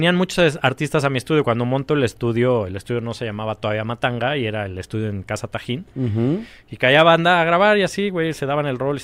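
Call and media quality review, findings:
Lost LE Audio frames at 8.35 s, after "banda a grabar y": brief noisy smear, not silence or a click, fitting one 10 ms LC3 frame concealed by sign-randomised spectrum repeat.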